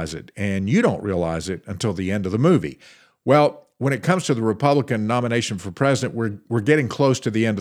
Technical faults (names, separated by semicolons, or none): none